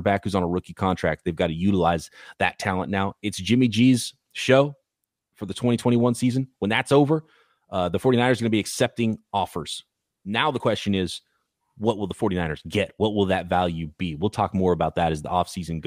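A speech recording with no technical faults to report. There is nothing here that needs a time or a cause.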